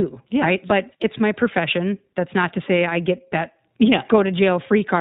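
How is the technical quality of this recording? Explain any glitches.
The recording has audible technical damage: the whole clip passes through the iLBC codec, and one short packet loss is concealed partway through.

The iLBC codec shapes the speech from start to finish. It is a narrowband VoIP codec, so nothing above 4 kHz survives, and it rebuilds each frame's excitation independently. The coding damage is plainly audible as a slightly rough, synthetic edge on the voice. The texture fits iLBC's 15.2 kbps mode with 20 ms frames. The result is a dull, band-limited sound rather than the swirly, watery smear of a low-bitrate wideband codec.

Lost iLBC frames cause the one glitch, from 1.18 to 1.20 s. About 20 ms of audio, probably a single frame, went missing. The decoder filled the gap by repeating the last pitch cycle blended with noise, so you hear a brief held, faintly buzzy vowel. Because iLBC frames don't depend on earlier ones, the voice recovers immediately afterward. 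A plain dropout would leave silence or a click instead, and other codecs can leave a longer smeared tail after a loss.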